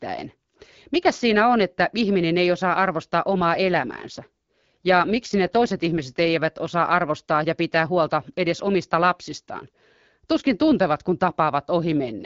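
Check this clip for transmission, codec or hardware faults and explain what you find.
There's one kind of fault, an AMR rate drop, heard twice over the AMR-WB (HD Voice) link, which carries only light codec roughness of its own.

AMR rate drop, from 3.44 to 6.30 s, after "ihminen ei osaa arvostaa" and before "osaa arvostaa ja pitää", and again from 11.79 s to the end: the codec steps down to a lower rate, likely to free bits for error protection, which fits a drop from 12.65 to 8.85 kbit/s. The bandwidth holds and nothing cuts out, but the speech turns rougher and more synthetic.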